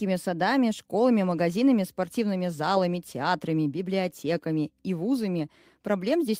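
Nothing in this recording of speech stands out as a technical fault at any point in the signal.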